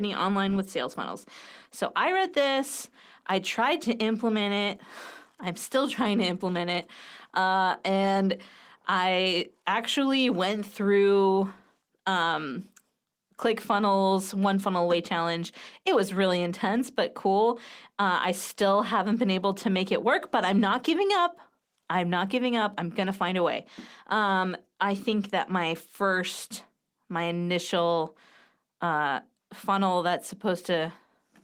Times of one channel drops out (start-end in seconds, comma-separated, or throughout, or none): none